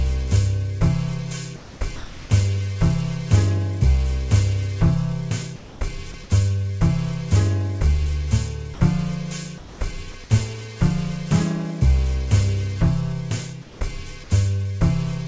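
Comfort noise in place of the background first appears at 1.56 to 1.80 s. The real background, about 19 dB below the loud parts, gives way to a smooth, featureless hiss roughly 5 dB quieter. This is likely discontinuous transmission: the sender stopped sending during the lull, and the receiver filled the gap with synthetic noise matched only to the background's rough spectrum.

Sound dropped by the voice detector follows at 1.96 to 2.30 s. About 150 ms of genuine sound vanishes into that same steady noise, probably because the detector mistook a quiet stretch for background and cut transmission too early. Shorter drops follow at 5.56 to 5.80 s (about 90 ms lost), 6.12 to 6.14 s, and 8.74 to 8.80 s, each giving way to steady noise before the sound returns.

Comfort noise in place of the background returns at 9.58 to 9.80 s, again about 5 dB down. Another brief drop occurs at 10.12 to 10.14 s. 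A final comfort-noise patch at 13.62 to 13.80 s dips about 7 dB. The whole clip lacks content above 8 kHz, which fits a G.722 call path.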